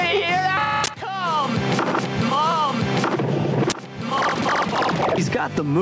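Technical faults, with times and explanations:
Throughout, gain pumping: the gain swings by around 15 dB, pulled down under loud moments, likely from gain set too high with a fast limiter clamping down.
0.84–0.88 s and 3.70–3.72 s, uninitialised buffer: sharp, loud bursts of digital noise lasting 40 ms and 20 ms, where leftover memory was played before real audio filled the block.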